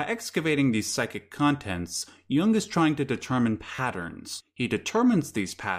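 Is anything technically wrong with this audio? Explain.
Yes, there are two repeated-buffer glitches in this speech. The first runs from about 1.97 to 2.02 s, and the second from 3.75 to 3.79 s, right after "is trying to determine". In both, fresh audio didn't arrive in time, so the device replayed the last 11.6 ms chunk (which fits a 512-sample buffer), four extra times in the first and three in the second. With such a short chunk, you hear a quick buzzy stutter with hard joins, and about 40 to 50 ms of real audio goes missing.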